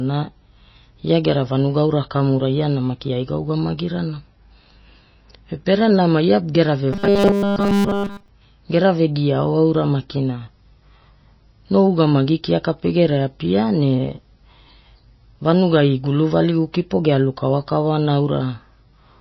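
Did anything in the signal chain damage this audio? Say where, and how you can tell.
Yes. Throughout, there's a watery, swirly texture, likely MP3 compression at the codec stage. It points to a low bitrate, around 24 kbps.

From 6.93 to 8.28 s, after "pere nama ia gera" and before "gera vegiaao", the sound becomes a rigid 200 Hz buzz. This is robotic sound from repeated short buffers, likely at the driver or buffer stage, with 5 ms chunks looped over the whole stretch.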